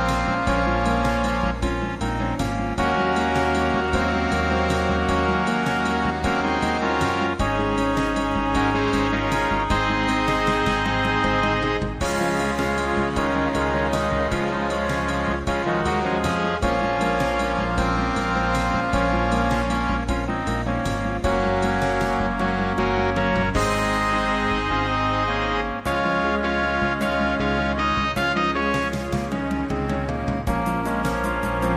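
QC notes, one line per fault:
No audible faults anywhere in this audio.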